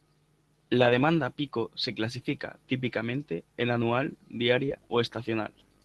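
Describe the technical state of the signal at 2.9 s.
At 2.9 s the signal is intact, with nothing to hear beyond the ordinary coding of the Opus call path it passes through.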